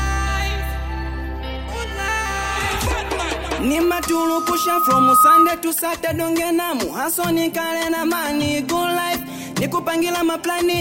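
From 3.58 s to 5.64 s a steady tone at 1.2 kHz swells over roughly a second and a half into a squeal about 10 dB above the sound. It is loudspeaker feedback squeal: the microphone picked up its own loudspeaker, and the loop gain at that frequency exceeded one.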